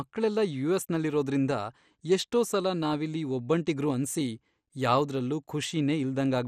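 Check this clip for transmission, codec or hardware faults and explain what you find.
Throughout the speech there's MP2 compression damage, likely from a low-rate encode: the sub-bands are starved of bits, so it sounds dull and gurgly, with nothing above 15 kHz.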